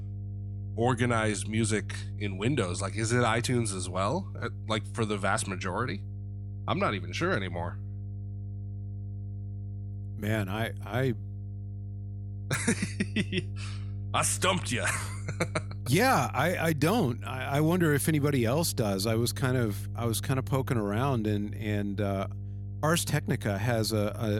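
A steady low drone sits under the speech from start to finish, only about 10 dB below it and so clearly audible throughout. This is mains hum at 50 Hz, the power line leaking into the signal through a ground loop or a nearby transformer.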